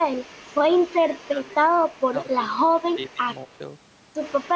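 Between 0.98 and 1.56 s, 2.28 and 2.57 s, 2.76 and 3.22 s, and 3.39 and 3.6 s, the speech dips by up to about 10 dB (about 5 dB in the last stretch) and thins in pieces. This is speech suppressed in double talk, likely from an echo canceller ducking the talker while the far side spoke. The waveform envelope shows notched troughs, and the spectrogram shows paler bands there.

From 3.49 to 3.58 s, an echo leak adds a very faint copy of the voice delayed by 176 ms, likely loudspeaker pickup that the canceller failed to remove. On a spectrogram it is a dim trace lagging behind the main energy.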